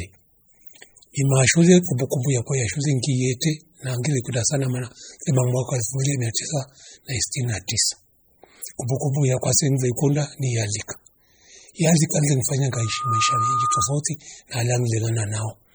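Throughout the speech, heavy codec damage gives a watery, swirly sound with smeared attacks, likely from MP3 compression at a low bitrate near 32 kbps. Nothing remains above 21.1 kHz.

From 12.73 to 13.96 s, just after "le mfanya", a loudspeaker feedback squeal appears. The loop gain exceeds one at 1.2 kHz. That tone swells in under half a second to roughly the level of the speech.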